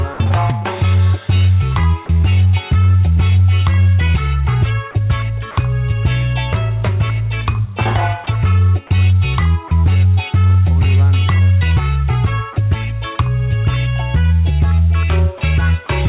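At 0.14 s the sound cuts out for about 60 ms, replaced by flat, steady noise until 0.2 s, likely sound dropped by the voice detector with comfort noise filling the gap.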